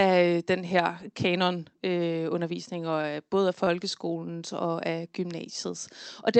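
At 3.01 to 3.07 s, right after "den her kanonundervisning", there's a short stall from a late packet: the jitter buffer ran dry and the sound got held about 26 ms. It happens again at 3.64 to 3.70 s after "både af", held roughly 31 ms, with a slight buzzy drag each time.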